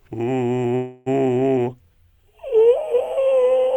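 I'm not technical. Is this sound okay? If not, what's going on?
No. A call audio freeze runs from 0.75 to 1.08 s. The music stalls and the last sound is stretched into a fading buzz. Data was likely held up in transit, so playback paused and resumed where it stopped, about 0.3 s late.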